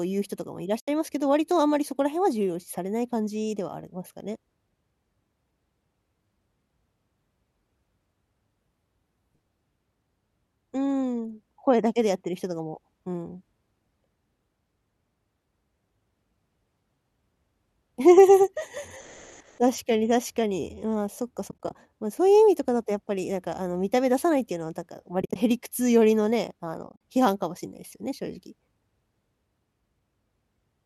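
Runs of AAC frames went missing and the decoder muted them, so overlapping windows fade the speech into soft-edged gaps: about 80 ms at 0.80 to 0.88 s, then scattered short holes over 21.49 to 21.75 s, 25.22 to 25.36 s and 26.87 to 26.99 s. The gaps fit the short frames of low-delay AAC, likely AAC-ELD at 64 kbps, whose light roughness is faintly audible.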